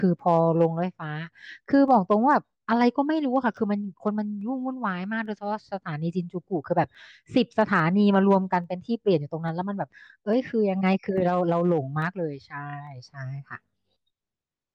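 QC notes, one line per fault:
0.19–14.56 s, clock drift buffer slips: A click recurs every 0.85 s across the speech, about twenty in all. The steady spacing points to two devices on separate clocks, likely drifting apart by roughly 200 parts per million. The buffer between them creeps full or empty until a tiny block of samples is dropped or repeated. Each jump fits a slip of only a few samples. That break in the waveform is the click.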